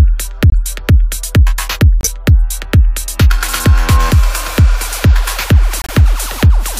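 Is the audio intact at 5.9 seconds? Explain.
No, 5.9 s falls right at the tail of a corrupt frame muted dropout running from about 5.82 to 5.91 s. Some compressed frames there got bit-flipped, the decoder rejected them, and the player filled the gap with silence. You hear the sound cut off abruptly into a dead hole about 88 ms long, which fits a handful of short codec frames, and then it picks up again on time with nothing shifted.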